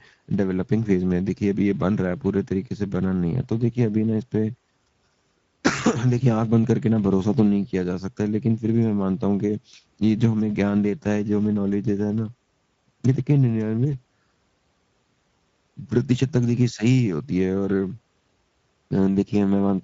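Across the whole speech clip, Speex codec coding is plainly audible: the CELP coder has too few bits for the excitation signal, so the speech sounds noisy and hoarse. The level of damage points to a setting near 17 kbps.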